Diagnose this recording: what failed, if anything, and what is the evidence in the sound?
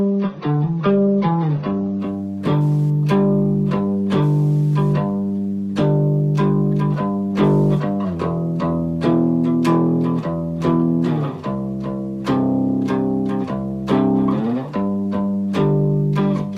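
Adaptive stream starting at a low bitrate, 0 to 2.0 s, at the network and playback stage: nothing sits above 6.9 kHz and codec smearing is heavier, then the full treble returns abruptly with no gap. This fits the player opening on a low-rate AAC rendition and switching to a much higher one, near 96 kbit/s, once throughput was measured.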